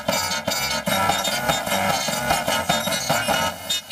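The audio carries a robotic buzz at about 375 Hz from start to finish, with no clear octave shift. It is planar audio read as interleaved: each 2.67 ms block, which fits 128-sample blocks, plays left then right at double speed, chopping the sound at the block rate.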